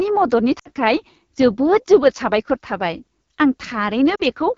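A speech clip carried over the AMR wideband (HD Voice) codec at a low rate, which fits about 8.85 kbit/s. The voice sounds plainly rough and raspy throughout. Lost AMR speech frames cause two dropouts. From 0.59 to 0.69 s, about 60 ms goes missing. From 4.15 to 4.21 s, about 40 ms goes missing. In each, the decoder stretches the last good sound and fades it quickly.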